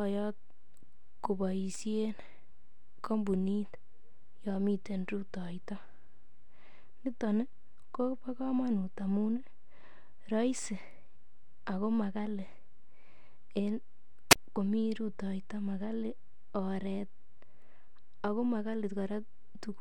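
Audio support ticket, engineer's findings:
Wireless microphone squelch dropout at 14.30–14.36 s: brief hiss rise, then a near-silent hole of about 29 ms before speech resumes. Probable component: analogue FM wireless link. RF signal fades below threshold and the receiver squelch mutes output.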